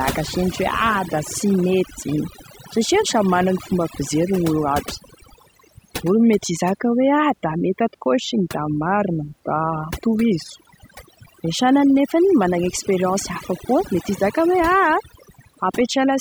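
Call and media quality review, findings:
Overdone noise removal, throughout the speech. Noise suppressor set too aggressively, muting individual frequency bands near its noise estimate, including quiet speech detail. Background drops and breaks up into twinkling specks.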